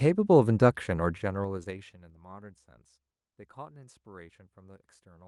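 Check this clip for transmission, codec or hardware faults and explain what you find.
Two faults are audible, both within the first half of the clip.

From 1.12 to 2.14 s the speech ticks with a zipper noise as its level falls by roughly 25 dB. The gain drops in 3 dB steps, about seven per second, with no smoothing between them, so each jump clicks.

From 1.63 to 1.67 s, during that fall, a short concealed packet loss causes a brief smear. About 20 ms of audio never arrived, and the receiver filled roughly 19 ms by extending the preceding sound before blending back into the real signal.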